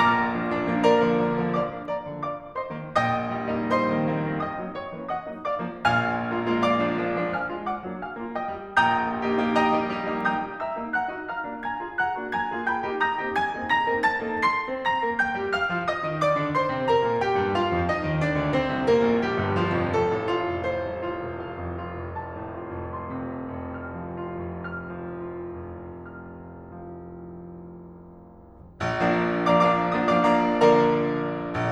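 The music carries no audible technical faults at any point in its course.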